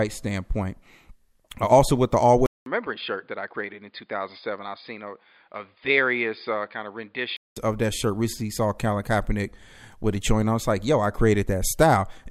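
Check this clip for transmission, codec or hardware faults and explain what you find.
One fault stands out, an input switched to a poorer device. After "also with the", at 2.46 s, the speech goes quiet for about 200 ms, then returns duller and about 5 dB lower, with nothing above 4.9 kHz and a faint new noise floor far beneath the speech. This likely means the recording moved to a narrower-band microphone or headset profile. At 7.57 s, before "of that shirt", the full-band input returns.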